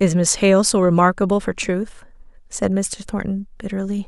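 Nothing here calls for comment, since no technical faults turn up anywhere in this bit of speech.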